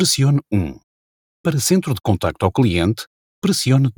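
Nothing in this one calls for comment, since there isn't a single technical fault to point to anywhere in the audio.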